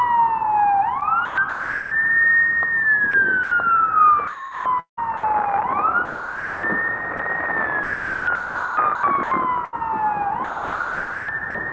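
From 1.0 to 1.91 s, 3.11 to 3.51 s and 4.27 to 5.23 s, the sound is chopped by the voice detector. The sender's detector is likely switching transmission on and off, so pieces of the sound (about 0.56 s, 0.1 s and 0.62 s in turn) are swapped for comfort noise. The result is choppy, with holes in the sound. On a waveform, detailed stretches alternate with flat, even noise. On a spectrogram, textured patches break into smooth, featureless bands, all stopping at 8 kHz from the G.722 call path.

From 6.05 to 6.63 s, and again briefly at 7.17 to 7.19 s, the sound is dropped by the voice detector. The detector likely mistook quiet material for background and stopped sending, so about 0.58 s and then 20 ms of sound are lost. Steady comfort noise plays in their place until sending resumes. On a waveform, this looks like a sudden low, uniform plateau. On a spectrogram, all structure vanishes into a flat noise wash.

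The chopping returns from 7.83 to 9.74 s, where about 1.09 s is replaced, and from 10.44 to 11.54 s, where about 0.88 s is replaced. It shows the same on-off chopping and the same alternation of detailed and smooth regions on both displays.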